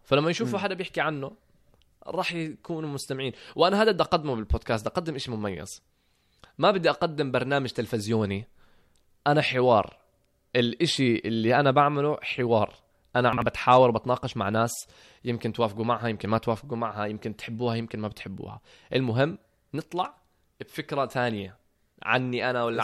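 At 13.33 to 13.42 s, chunks out of order: one 46 ms chunk plays one slot late, leaving a brief jumbled moment with three hard joins.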